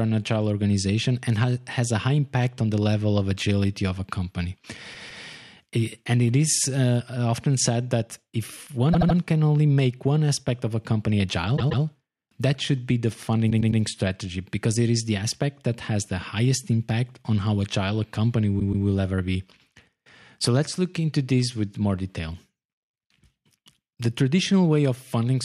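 At 4.93, 8.92, 11.56, 13.49 and 18.59 s the speech stutters from repeated frames: a compressed block of 78 to 157 ms plays two or three extra times. Unlike a dropout, nothing is missing; each stutter instead adds 0.24 to 0.31 s.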